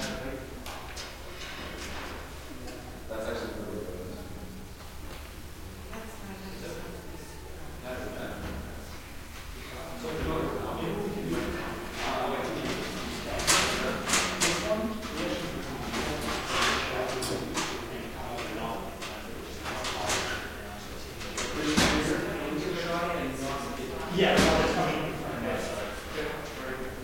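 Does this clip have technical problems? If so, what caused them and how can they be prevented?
Yes. Low bit depth without dither runs through the whole clip: the sound carries a grainy distortion that tracks its level, roughening quiet passages, at roughly 25 dB below the signal. This likely comes from rounding to about 7 bits with no dither. Prevent it by keeping 16 bits or more and dithering before any reduction.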